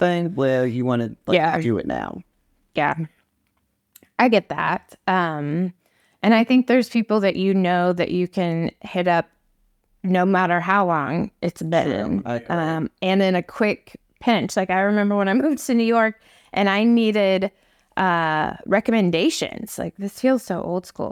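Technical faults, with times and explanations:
No technical faults can be heard in this speech clip.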